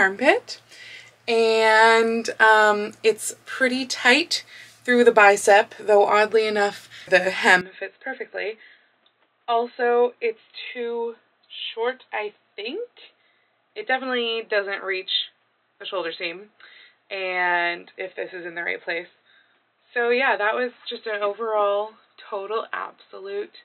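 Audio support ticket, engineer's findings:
Input switched to a poorer device, 7.61 s to end. Band abruptly capped at 4.1 kHz, sound turns dull with no gap at the changeover; level drops about 5 dB, new noise floor roughly 50 dB down. Likely a different microphone or headset call profile taking over.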